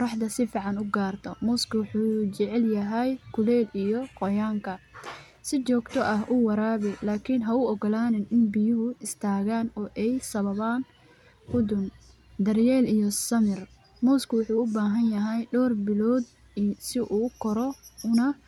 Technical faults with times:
none

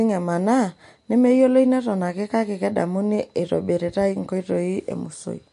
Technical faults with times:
0.00-5.53 MP3 compression

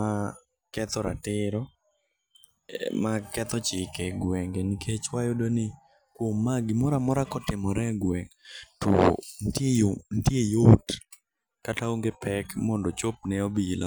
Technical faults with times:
7.31 block of digital silence
9.33 block of digital silence

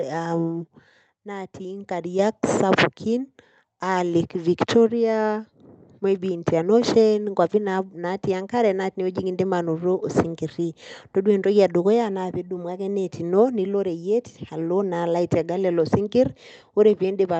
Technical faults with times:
2.19 microphone volume stepped up

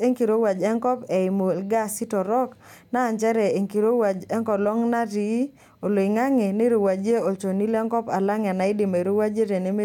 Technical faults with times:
none

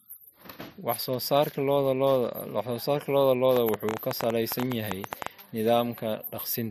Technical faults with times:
3.56-5.27 train of clicks

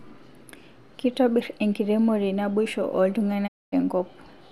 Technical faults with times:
3.46-3.74 digital broadcast dropout

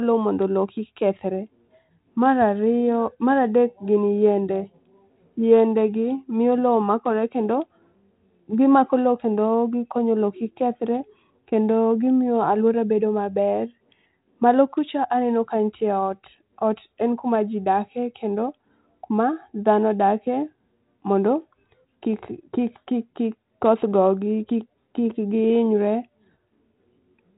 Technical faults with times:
none

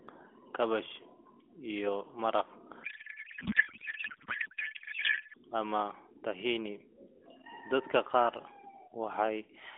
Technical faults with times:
2.84-5.37 codec payload misread

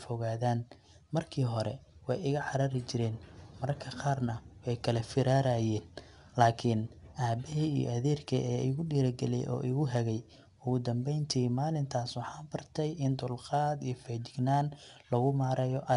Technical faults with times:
0.00-15.96 4-bit ADPCM compression

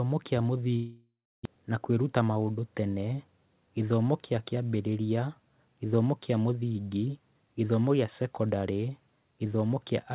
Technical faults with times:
0.76-1.47 long network dropout
2.04-2.43 jitter buffer speed-up

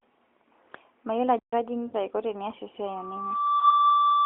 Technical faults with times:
1.39-1.53 playback stall
1.86-1.94 lost AMR speech frames
2.85-4.25 loudspeaker feedback squeal
3.60-3.63 lost AMR speech frames

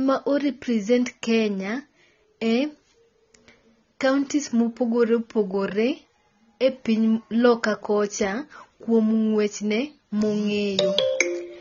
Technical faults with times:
0.00-11.61 AAC compression

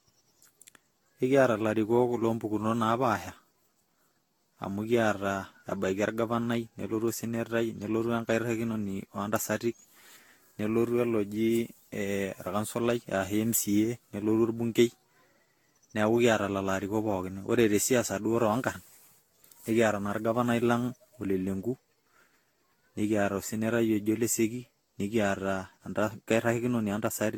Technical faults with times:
0.00-27.38 generation loss

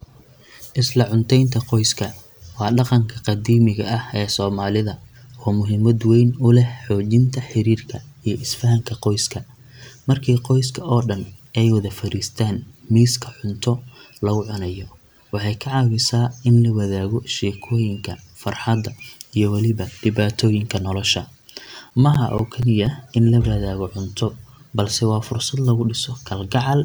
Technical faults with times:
21.19-23.10 CD scratch ticks

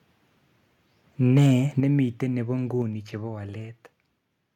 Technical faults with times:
1.36-1.53 microphone overload
1.80 microphone volume stepped down
2.82 microphone volume stepped down

